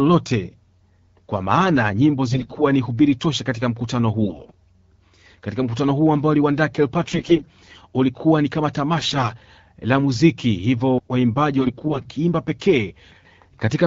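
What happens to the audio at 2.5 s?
AMR bit errors, 2.32 to 2.64 s: flipped low-priority bits misplace excitation pulses, so level holds but the voice turns gargly, its spectrogram harmonics smearing into noise.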